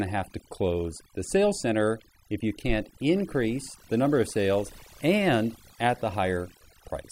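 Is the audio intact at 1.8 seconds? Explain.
No. Overdone noise removal runs throughout, including 1.8 s: an overly strong noise reducer silences frequency bands near its noise estimate, leaving twinkling specks in the background.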